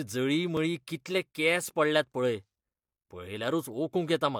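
At 0.57 s a dropped buffer (overrun) likely discarded a few milliseconds, splicing the sound together with a small jump just before "कितले केंस पडल्यात पळय".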